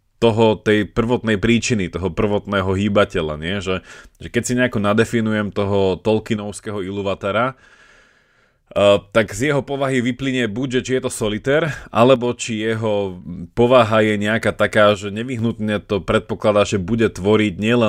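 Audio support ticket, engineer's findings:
Likely one stereo channel dropping out, so the mono sum loses half its contribution: speech level falls abruptly by about 6 dB at 6.36–8.76 s (after "si nejako nadefinujem toho"), 9.27–11.67 s, 12.16–13.24 s (before "povaha je nejaká taká") and 14.94–15.39 s (before "to predpokladá že").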